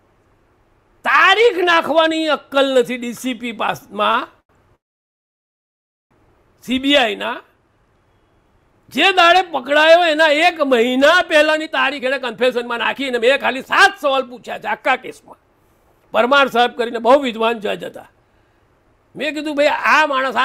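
A couple of short stalls from late packets kick things off: at 4.11 s a sound gets held for about 27 ms, and at 4.40 s another is stretched for about 91 ms. In both cases the receiver's jitter buffer ran dry, so it held the last sound until the packet turned up and then carried on from the same spot, with nothing actually lost. Right after, from 4.75 s to 6.13 s, there's a call audio freeze: the last sound trails off almost immediately and you get about 1.33 s of silence in a 1.36 s hold. When the audio comes back it picks up where it left off, so it's an inserted gap rather than a dropout. The likely cause is packets held up in the network long enough to empty the buffer completely. Then from 11.45 s to the end at 20.44 s there's a jitter buffer speed-up. Everything runs at about 113% speed with the pitch unchanged, so it sounds hurried. That's the receiver trimming tiny pitch-period-sized slices over and over to burn off the extra delay it built up earlier, removing roughly a second in total across that stretch.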